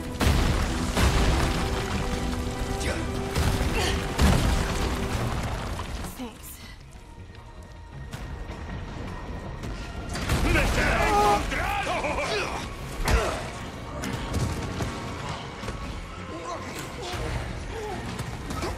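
No technical faults are audible anywhere in the audio.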